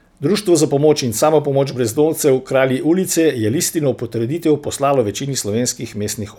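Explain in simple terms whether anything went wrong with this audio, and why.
Nothing went wrong with this audio, because there is no fault to hear anywhere in the speech.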